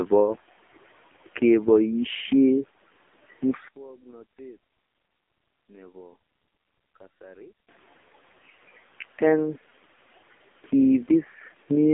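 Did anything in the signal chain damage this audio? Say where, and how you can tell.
Yes. The codec stage damaged the whole clip. It carries the AMR narrowband mobile codec throughout: the speech sits in a 250 Hz to 3.5 kHz line band, with nothing above 3.6 kHz. The damage is heavy, and the voice sounds buzzy and synthetic, which fits one of the lowest AMR-NB modes, around 5 kbps. At that rate the vocal-tract model gets only a few pulses per 5 ms subframe, so the fine detail of the voice is rebuilt coarsely and sounds artificial.

From 3.68 to 7.69 s the level collapses by about 26 dB, leaving only a faint residue of the speech before it returns at full strength. That is the signature of one channel inverted at a wiring or mixing stage, likely a polarity flip on one leg followed by a mono sum. Content common to both channels cancels, and only the small left-right difference survives, which is why the centred speech nearly disappears.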